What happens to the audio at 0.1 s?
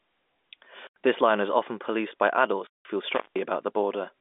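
Nothing goes wrong at 0.1 s: the speech there is intact, carried on the narrow G.711 telephone band without any break or added fault.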